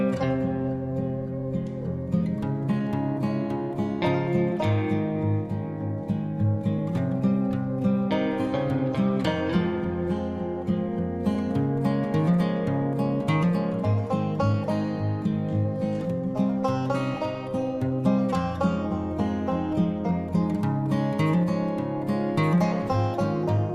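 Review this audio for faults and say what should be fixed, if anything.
Clock drift between sender and receiver runs through the whole clip. The sender's audio clock is running fast, by something on the order of 5 percent, so samples arrive quicker than the receiver plays them and its jitter buffer keeps filling. The receiver has to shed audio to keep up, and the sound carries small, unevenly spaced timing hiccups from start to finish. Locking both ends to a common clock, or adding proper sample-rate compensation at the receiver, would prevent this.

Repeated timing corrections are the receiver's response to that drift. From 0.29 to 4.53 s it trims short pieces hard enough that the audio runs at about 104 percent speed. After a gap it resumes from 6.44 to 23.58 s at about 102 percent. Each cut is small, but together they give a slightly hurried, unsteady tempo with faint skips at irregular points. 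Smooth time-stretching instead of discrete cuts would make these corrections inaudible.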